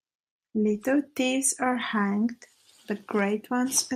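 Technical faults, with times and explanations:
No technical faults, with times or otherwise, are present in this speech clip.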